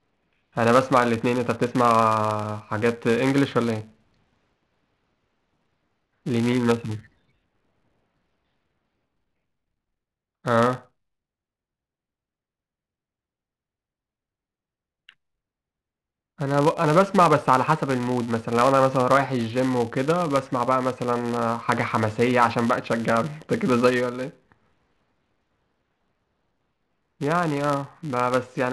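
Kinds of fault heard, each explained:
Filter restarted on every block, throughout: the filter drops its stored state at each block boundary and begins every block as though the input before it had been silence, so each block opens with a small transient. Here those transients recur 200 times per second, pointing to blocks of 5 ms, and fuse into a steady 200 Hz buzz under the speech that grows louder and quieter with the speech level.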